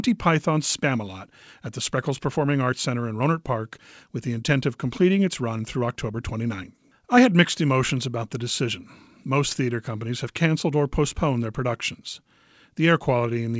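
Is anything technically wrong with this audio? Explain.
No, nothing stood out on listening to this speech.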